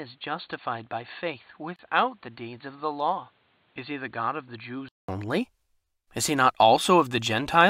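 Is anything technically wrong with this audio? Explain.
Yes, two faults. Input switched to a poorer device, 0.0 to 5.09 s: the speech lacks anything above 4.5 kHz, sits about 10 dB quieter with faint noise roughly 35 dB down, then clears after a 200 ms silence, likely a change of microphone. Gap at a join of encoded pieces, 1.76 to 1.79 s: a 29 ms hole with smeared edges, where separately encoded pieces, joined every 6.0 s, kept their padding.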